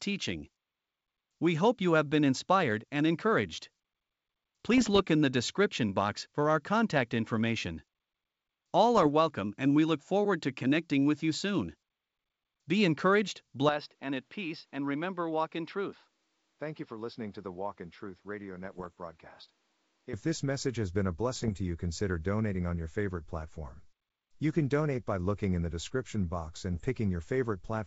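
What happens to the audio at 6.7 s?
Nothing goes wrong at 6.7 s: the speech runs on intact, carried by G.722 wideband telephone coding at 64 kbit/s with no more than a faint trace of its upper-band hiss.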